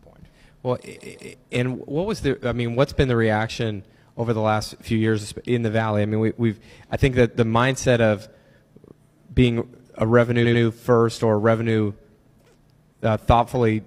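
A run of compressed frames was written or sent more than once, so the decoder plays the same stretch of audio again: repeated frames. From 0.93 to 1.31 s a 185.8 ms block, which fits four frames, plays twice more, and from 10.41 to 10.59 s a 92.9 ms block, about two frames, also plays twice more. Each is heard as a stutter, and together they lengthen the audio by about 0.56 s.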